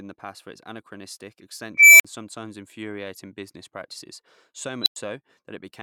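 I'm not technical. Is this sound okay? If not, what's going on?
No. An unstable filter makes a squealing tone, about 2 kHz, swell over a quarter second from 1.74 s after "past for its anachronistic" and cut to brief silence. A second squeal, about 4 kHz, at 4.82 s rises within 45 ms before a 0.1 s dropout.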